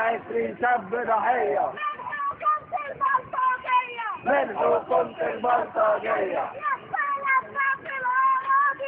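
No technical faults can be heard in this audio.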